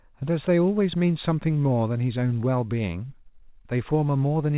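Nothing goes wrong in this speech clip; it simply carries the narrow call-line sound of a G.711 mu-law codec, with nothing above 4 kHz, which fits a standard 64 kbps phone-quality link.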